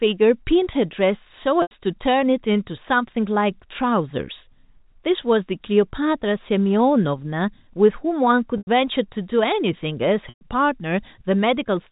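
Packet loss with pitch repetition occurs at 1.62 s, 8.58 s and 10.29 s, with gaps of 90 ms, 90 ms and 120 ms. Each time, audio went missing in transit, and the receiver bridged the hole by repeating the last pitch period of the speech, fading it over about 50 ms. Each gap is heard as a held, buzzy tone that dies away before the speech resumes with a brief cross-fade, heard through the narrow telephone band of G.711 coding.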